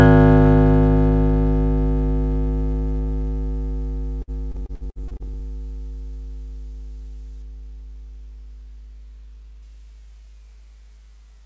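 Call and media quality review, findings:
Repeated packet loss (robotic sound), 4.22–5.40 s. Music turns choppy, with pieces missing: a run of short dropouts, the longest about 59 ms, each patched by extending the last received sound. Roughly a quarter of this span is concealment rather than real signal. Probable component: network path into the jitter buffer, with loss concealment filling holes. Band-limited to 8 kHz throughout, consistent with G.722 on a WebRTC call path.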